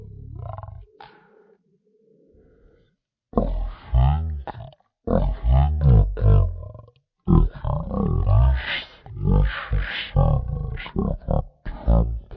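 Speech running throughout at the wrong sample rate, slowed to a third of its speed and dropped about 19 semitones, which fits 48 kHz audio played back at 16 kHz. Pitch, formants and tempo all fall by that same ratio, unlike a pitch shift or time-stretch, which alters only one.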